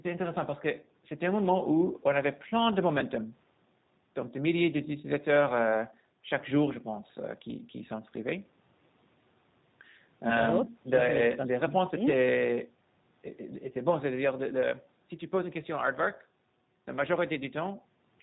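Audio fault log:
Throughout, G.729 codec: the speech is rebuilt rather than passed through, from a vocal tract filter, a pitch predictor and a handful of pulses per 10 ms frame. That gives a plainly audible rough, slightly synthetic edge that points to an 8 kbit/s codec. Unlike simple narrowband filtering, which only dulls the sound, here nothing above 4 kHz survives and the voice itself takes on a buzzy, reconstructed texture.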